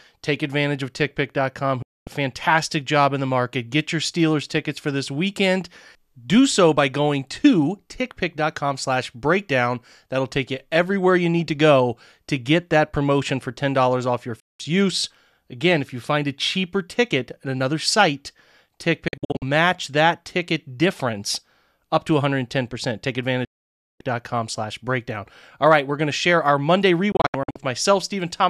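Digital broadcast dropouts mute the speech at 1.8, 14.4 (after "off your"), 19.1 (short scattered holes before "that ticket difference up"), 23.4 (over half a second, before "slash breakdown") and 27.1 s, again in scattered holes. Each cut fades within 3 ms to clean silence, not to the hiss of analogue fading. The receiver lost valid frames and stayed muted until good ones returned, so the speech sent during each gap is gone.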